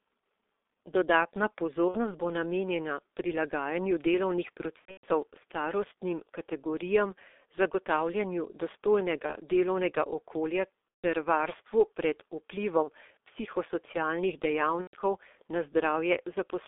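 Throughout, the speech sounds muffled and hoarse, with smeared consonants and nothing above about 3.6 kHz or below about 300 Hz. This is the G.723.1 codec, heavily degrading the sound. Its coarse 30 ms frames and slowly updated voice model fit the 6.3 kbit/s mode.

Buzzy, fading stretches of tone or coloured noise interrupt the speech at 1.89–1.97 s, just before "bo namenjena prilagajanju delovnih", and at 4.79–5.06 s, where the dropouts are scattered. They recur at 9.26–9.35 s, just before "delovnega okolja ter varstvu", and at 11.01–11.04 s. Further stretches follow at 12.83–12.90 s, right after "okolja ter varstvu pred", and at 14.81–14.96 s. This is VoIP packet loss concealed by the speech codec. The decoder repeats its last pitch and filter with falling gain, and the speech stays weak briefly after each gap.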